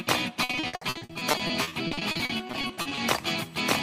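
From 0.43 s to 2.99 s there is repeated packet loss, giving a robotic sound. Dozens of short gaps, the longest 60 ms, are each patched by extending the preceding audio. About 960 ms is concealed, 38% of the stretch, producing choppy sound with pieces missing.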